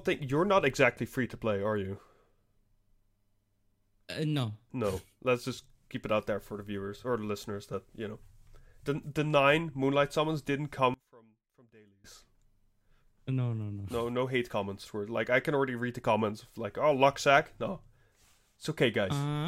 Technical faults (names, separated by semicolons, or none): one channel inverted